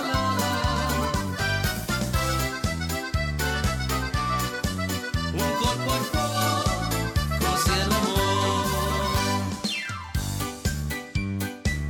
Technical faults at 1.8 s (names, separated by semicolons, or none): none